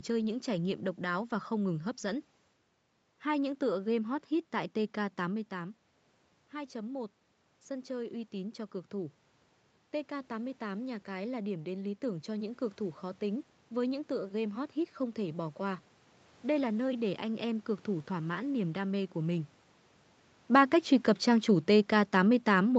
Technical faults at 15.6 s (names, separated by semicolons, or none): automatic gain rising